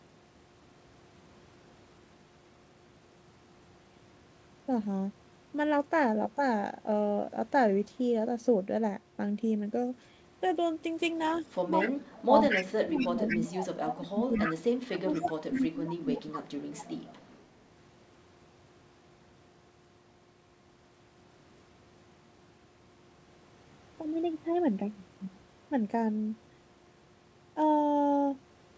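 From 11.27 to 11.4 s a faint delayed copy of the speech appears, about 25 dB below it and trailing by 222 ms. This is an echo leak, likely from a far-end loudspeaker whose echo canceller let residual pickup return. It recurs much louder, about 5 dB down, at 11.8 to 11.89 s, 12.49 to 13.4 s and 14.34 to 14.54 s. It returns at about 20 dB down at 14.9 to 15.62 s and 16.77 to 16.85 s.

Overlapping this, from 11.69 to 14.65 s and again from 15.01 to 16.37 s, the talker's level dips unevenly, by as much as roughly 30 dB. This is speech suppressed in double talk. The canceller, likely unable to separate the near talker from the echo, attenuated both together.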